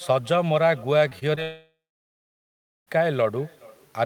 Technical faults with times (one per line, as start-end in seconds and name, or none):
0.00-4.06 echo with no canceller
1.09-1.39 short concealed packet loss
1.43-2.89 long network dropout